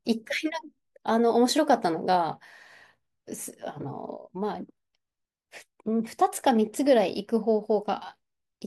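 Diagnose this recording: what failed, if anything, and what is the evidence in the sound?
Nothing failed; every stage of the chain sounds intact.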